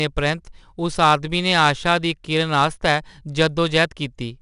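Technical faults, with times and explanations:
Throughout, 4-bit ADPCM compression. Each sample is coded as a coarse 4-bit step from a predicted value. The leftover error rides on the speech as a plainly audible gritty hiss. Nothing sounds above 10.7 kHz, dulling the top. This fits roughly 89 kbps.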